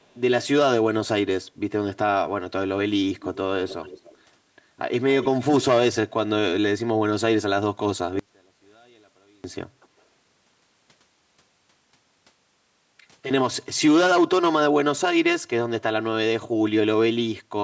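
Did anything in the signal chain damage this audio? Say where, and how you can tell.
Yes. The damage is at the call-processing stage, with faint delayed copies of the speech at 0.02–0.17 s, 3.18–3.38 s, 3.68–4.17 s and 5.22–5.45 s. This is an echo leak, likely from a far-end loudspeaker whose echo canceller let some of the playback back into the microphone. The copies trail by 315 ms in the first case and 287 ms after that. The first is very faint and the later ones sit roughly 15 to 20 dB below the speech. A fixed lag like this separates it from room reverberation, which smears continuously instead of repeating.

The second fault is a stereo channel with inverted polarity between 8.19 and 9.44 s, likely introduced in the wiring or in a channel-handling stage. When the channels are summed to mono, the centred speech cancels and the level falls by about 34 dB, so only a faint difference signal remains. 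A dropout would leave silence and a gain error would keep the speech's full character. Here a faint residue is left, and the speech comes back intact once the inversion ends.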